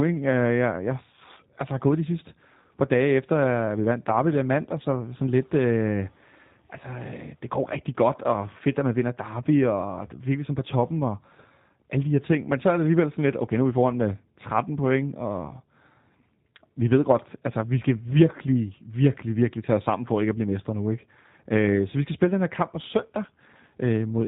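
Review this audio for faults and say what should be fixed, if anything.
Throughout the clip, the speech sounds rough, buzzy and somewhat synthetic, with a muffled top end where nothing above 4 kHz comes through. This is G.729 codec damage, and it is plainly audible. The coder discards the actual waveform and rebuilds each 10 ms frame from a vocal tract filter, a pitch predictor and a few pulses per half-frame. The result fits an 8 kbit/s G.729A stream. To prevent it, use a wideband codec such as G.722 or Opus on the call path.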